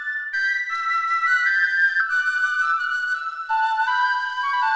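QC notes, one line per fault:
2.0 s, skip ahead: the receiver discarded roughly a second of audio that had piled up behind a delay, and playback leapt straight to later material with nothing filled in. The two sides of the cut are butted together with no audible gap, so the sound simply lurches forward, losing around a second of content in one abrupt join, with the call path's G.722 coding, which has nothing above 8 kHz, carrying on across it.
2.13–3.29 s, jitter buffer speed-up: after the jump the jitter buffer still held more audio than it aims for, so it trimmed short pitch-period-sized slices again and again, removing something like a tenth of a second in total. Over this stretch the sound runs about 9% fast while keeping its pitch, giving a slightly hurried, compressed feel until the buffer settles back to its target depth.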